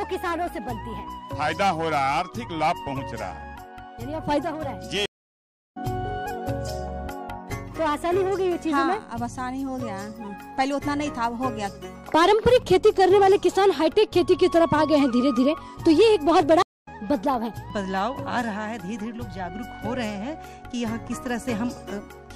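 At 5.06 s and again at 16.62 s the stream drops out in a stream reconnect: the connection breaks, a fresh decoder restarts mid-stream, and after silences of 0.70 s and 0.24 s the audio resumes later, skipping roughly half a second and about 150 ms respectively.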